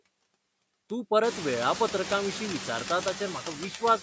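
From the start, a noise suppressor is working frame by frame, pulling down whatever bands it judges to be steady noise by about 21 dB. When the room noise rises by about 20 dB at around 1 s, the suppressor has more to fight. The background drops away between phrases and swells back under the speech.

From 0.12 s to 3.96 s, word clock ticks run through the sound. A digital link is being read by a device on its own clock, not locked to the sender, and the two clocks drift apart by a few hundred parts per million. Each time they slip past each other, a single sample is dropped or repeated. The result is a steady train of sharp ticks about every 70 ms, around fifty in all, some louder than others.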